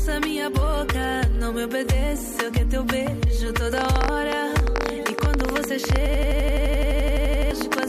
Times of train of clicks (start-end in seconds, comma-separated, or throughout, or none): 3.78-7.84